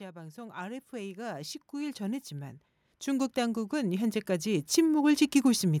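From 0.12 s to 5.24 s, the level climbs steadily by about 19 dB. This is automatic gain rising. The gain control judged the input too quiet and kept turning it up. Speech and background noise swell together, slowly, across those five seconds.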